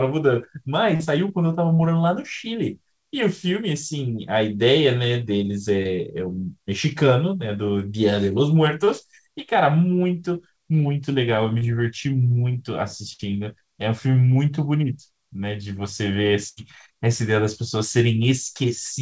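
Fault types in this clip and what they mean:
Short concealed packet loss: brief holes of 20 to 40 ms where speech never arrived in time, patched by stretching the preceding sound, heard as small smears or wobbles at 0.96, 1.75, 5.83, 8.85 and 11.59 s. On a spectrogram, which is empty above 8 kHz throughout, the harmonics run briefly flat and unchanging before rejoining. The waveform shows a few copied, near-identical cycles where the natural shape should be.
Burst of packet loss: longer runs of lost audio, about 60 ms at 13.13 s and 80 ms at 16.49 s, where the receiver prolonged the last sound while fading it down, giving a held buzz or dying hiss before speech picks up further along. A spectrogram shows frozen horizontal stripes weakening, then an abrupt jump. The waveform shows a steadily shrinking repetitive envelope followed by a sudden restart.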